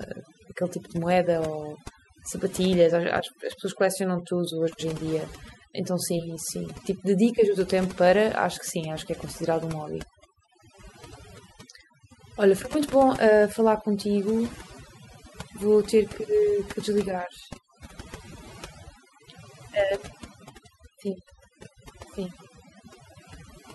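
Overdone noise removal runs throughout this speech recording: an over-aggressive reducer cuts near-noise frequency bands, leaving twinkling near-silence between phrases and taking quiet parts of the voice with it.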